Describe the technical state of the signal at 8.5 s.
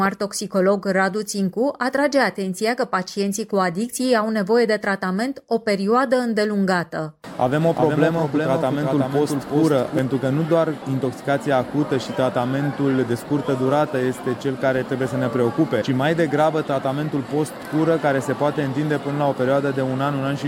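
At 8.5 s you're right in the middle of a doubled audio track, running from about 7.61 s to 9.99 s. A second full-band copy of the sound trails the original by roughly 400 ms, sitting around 5 dB quieter, with no decay or room colour on it, so it reads as a dry, out-of-step echo. It cuts in and drops out abruptly at those edges. The likely cause is the signal being picked up again through a slower path, or an edit holding two misaligned copies.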